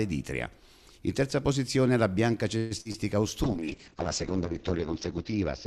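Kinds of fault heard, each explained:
Call audio freeze: Around 2.57 to 2.73 s the sound stalls and the last moment is stretched into a fading buzz or hiss lasting about 133 ms. This is likely the receiver's buffer running dry while packets were held up in transit. Nothing is lost; playback resumes where it stopped, so everything afterwards sits about 133 ms later. A spectrogram shows smeared, repeating horizontal bands that fade, and the waveform shows a decaying repetitive stretch rather than a flat gap.
Short concealed packet loss: Two brief holes follow. At 2.81 to 2.88 s about 40 ms of audio never arrived and was filled with roughly 43 ms of guessed continuation. At 2.92 to 2.96 s about 20 ms was replaced with 19 ms of fill. Each is heard as a quick smear or wobble. On a spectrogram these look like short blurred patches breaking the fine detail.
Call bitrate drop: From 3.45 s to the end the encoder is pushed from 96 kbps down to 7 kbps, staying at that floor for about 1.6 s. 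At that rate the audio is coded coarsely and the bandwidth shrinks from 20 kHz to 8 kHz, so the sound turns muffled, rough and watery. A spectrogram shows energy abruptly cut off above 8 kHz, with blocky, grainy texture below it. The waveform looks less detailed.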